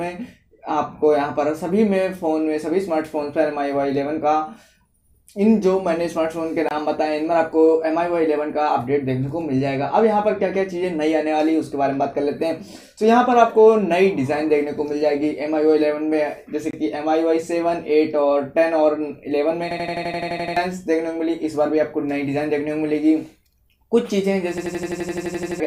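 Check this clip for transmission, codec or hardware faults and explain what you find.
Two kinds of fault are present: gaps between chunks and a system hang loop.

The gaps between chunks fall at 6.69 to 6.71 s and 16.71 to 16.73 s. Each is a silent hole of about 23 ms with hard edges. They sit 10 s apart, matching a 10 s chunk length. The audio was delivered in blocks, and something left empty time at each join. Nothing is lost. The sound simply stops briefly and resumes.

The system hang loop occurs at 19.71 to 20.57 s and again at 24.58 to 25.60 s. Each time, one 85.33 ms slice repeats exactly, 10 times and then 12 times. That length fits a 4096-sample ring buffer. The machine stalled while the sound hardware kept replaying that buffer. At 11.7 Hz the result is a rapid mechanical stutter. Each episode replaces roughly a second of audio.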